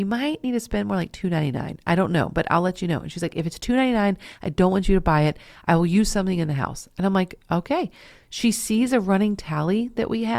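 No technical faults can be heard anywhere in the speech recording, and the signal stays continuous and stable throughout.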